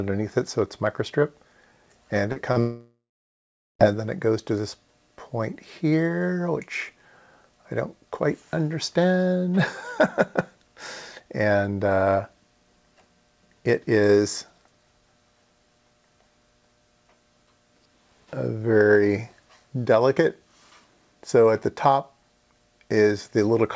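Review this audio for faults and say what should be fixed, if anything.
Short concealed packet loss occurs at 2.32 to 2.39 s and again at 2.52 to 2.59 s. About 40 ms of audio is missing each time. The receiver fills each gap by extending the preceding sound, which leaves a brief smear before the real signal blends back in. Better jitter buffering or forward error correction on the link would prevent these gaps.

A long network dropout follows from 2.60 to 3.82 s. About 1.2 s of audio never plays. A fading continuation of the last sound comes first, then roughly 0.8 s of silence, and the sound resumes with that stretch lost. The likely cause is a stalled network path. A more stable connection, or redundancy and retransmission on the call, would prevent it.

The sound carries nothing above 8 kHz, which fits a G.722 call codec.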